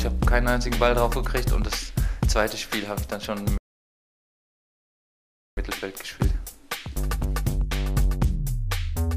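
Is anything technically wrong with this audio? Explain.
Yes. A rebuffering stall runs from 3.58 s to 5.57 s. The player ran dry and waited, so about 2 s of silence is inserted. The waveform flatlines there, the spectrogram shows a blank band, and the sound then resumes exactly where it stopped.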